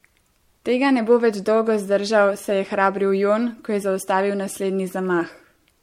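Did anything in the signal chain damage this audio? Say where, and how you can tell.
Yes, codec stage: generation loss throughout. Swirly, hollow speech. Blurred attacks. Nothing above 16.5 kHz. Likely about three MP3 encodes, each adding fresh quantisation noise.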